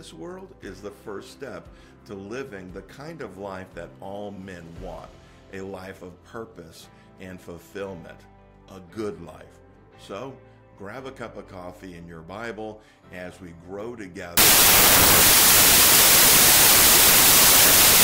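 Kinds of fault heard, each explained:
Wrong sample width: from 14.37 s to the end at 18.04 s, the sound collapses into loud, harsh noise with the original buried inside, playing at two-thirds speed and correspondingly lower in pitch. The data were stored as packed 24-bit samples but are read two bytes at a time as 16-bit. Many values are stitched together from mismatched bytes, only some keep the real signal's top bits, and the 3:2 byte ratio stretches the timing.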